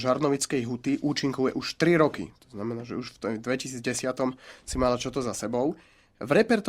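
From 0.11 s to 6.66 s, clock slip clicks run through the speech as faint, evenly spaced ticks, roughly every 70 ms, around a hundred in all. Their steady rhythm and lack of gaps set them apart from dropouts, and they likely come from unsynchronised clocks differing by a few hundred ppm.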